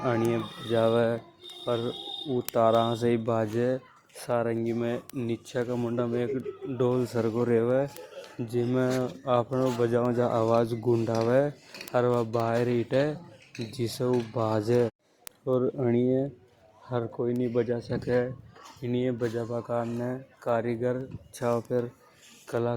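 A receiving device running on its own clock, not locked to the digital source and off by around 100 ppm, produces word clock ticks from 0.14 s to 22.57 s. Roughly every third of a second, one sample slips, giving about a hundred sharp ticks of uneven strength across the speech.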